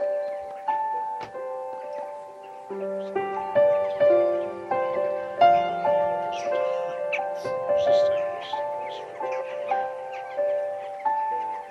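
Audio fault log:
5.68 s and 9.40 s, compressed frames skipped: at both points the decoder plays nothing for a run of encoded frames, either because they are missing from the stream or because they were rejected as corrupt. Roughly a fifth of a second of audio drops out at 5.68 s and somewhat less at 9.40 s, which fits about ten and about seven frames. The sound jumps forward at each join.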